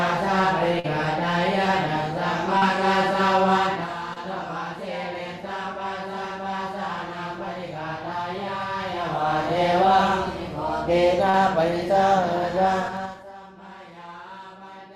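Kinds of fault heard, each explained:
Short concealed packet loss: Four brief smears or wobbles interrupt the sound at 0.79, 2.58, 4.13 and 11.30 s, each lasting only a few hundredths of a second. Each one is a gap where audio arrived too late for the decoder, roughly 40 ms missing in three cases and 20 ms at 4.13 s. The receiver patched each hole by extending the preceding sound for about 24 to 44 ms, then crossfaded back into the real signal.
Zipper noise: A ticking, zipping texture rides on the sound from 12.80 to 13.31 s as the level drops by around 20 dB. The fall is applied in coarse 3 dB steps, about ten a second, with no smoothing between them. Every step is an abrupt jump in gain, and each jump leaves a small click, so the fade is heard as a rapid chain of ticks instead of a clean slide.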